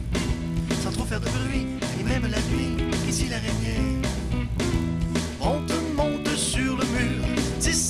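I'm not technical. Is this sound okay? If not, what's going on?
No. There's a buzz the whole way through. The resampler restarted on every block, fumbling the joins between chunks 20 ms long, so it ticks about 50 times a second whenever sound plays.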